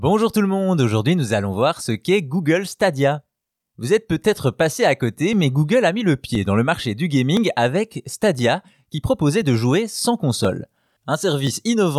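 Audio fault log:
5.33–11.47 s, periodic USB or driver dropouts: about seven brief ticks, evenly spaced at 1.02 s, each where roughly a millisecond of speech is skipped outright. The strict regular spacing, heard only while there is signal, separates this from random clicks or network packet loss.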